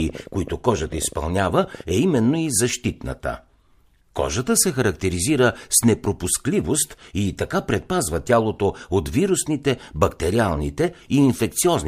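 Speech clip, and right from the start there's a train of clicks running from 0.00 to 2.36 s, ending just before "и защитната". It's roughly thirty near-identical pops at an uneven pace, averaging about 14.1 per second, with peaks around 5 dB above the speech, so they tick through pauses as well as over the talking. That kind of repeating pulse is likely interference from nearby gear or a faulty connection or power supply.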